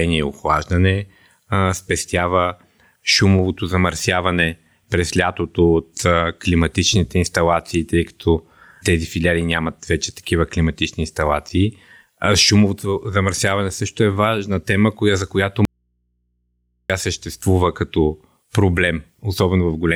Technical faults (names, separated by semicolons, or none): audio dropout to a faint residue